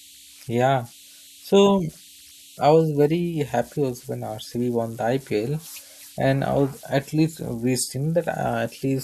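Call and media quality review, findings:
Converter idle tones throughout: faint whistle around 3 kHz, about 26 dB below speech. Undithered delta-sigma converter cycling. Spectrogram: thin steady horizontal line near 3 kHz.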